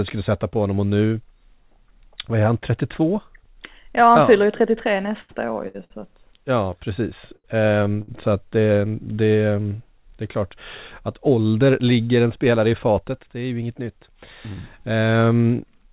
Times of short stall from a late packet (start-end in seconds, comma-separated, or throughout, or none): 7.36-7.46, 8.02-8.10